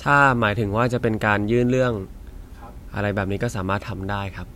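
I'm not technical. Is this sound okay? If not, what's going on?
Yes, this sound is okay, and nothing is going wrong in it.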